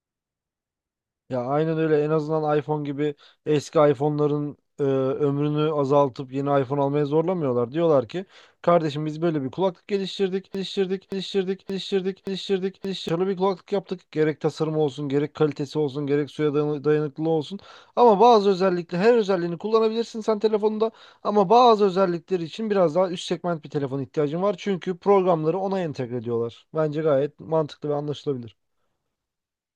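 At 10.55 s the speech locks into a broken-record loop until 13.09 s. A fragment of about 0.57 s repeats exactly, four times, back to back. A stalled player or stream likely kept resending its last buffer. The speech meant for that span is lost.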